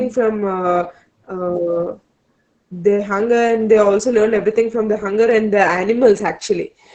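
From start to finish the speech carries Opus voice compression, with heavy codec damage throughout. The band stops at about 8 kHz, the wideband limit, so the top of the sibilants and breath detail is lost and the sound is muffled. The SILK linear-prediction coder is spending very few bits on the excitation, which leaves the voice hoarse and faintly robotic. This degree of coarseness points to a bitrate of around 10 kbps.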